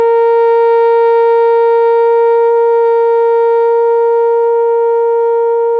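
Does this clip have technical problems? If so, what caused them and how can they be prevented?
No, the music has no technical faults.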